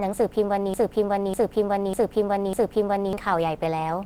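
From the start the speech carries Opus compression, likely from a low-rate encode near 16 kbps in the codec's hybrid mode. It sounds plainly muffled and hoarse. A spectrogram still shows energy up to about 20.2 kHz, but the upper bands look grainy and noise-filled.

From 0.74 s to 3.13 s a broken-record loop takes over. The same 0.6 s fragment plays four times back to back, the stream likely having stalled and repeated its last piece, and the speech meant for that stretch is lost. The waveform shows identical blocks tiled end to end.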